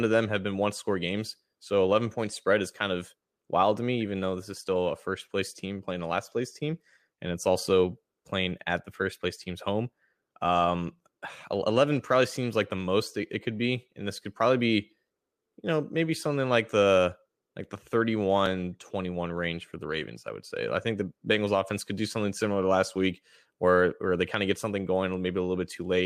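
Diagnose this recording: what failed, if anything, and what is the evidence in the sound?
No fault found in this recording.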